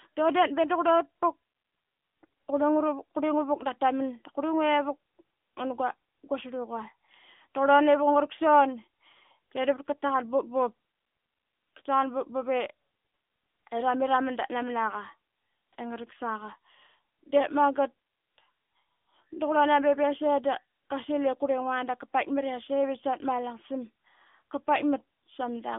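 Throughout, AMR narrowband mobile codec coding squeezes the speech into a band of roughly 250 Hz to 3.5 kHz with nothing above 3.7 kHz. Unlike a plain band limit, it adds a buzzy, synthetic edge, consistent with a mid-range rate around 10.2 kbps.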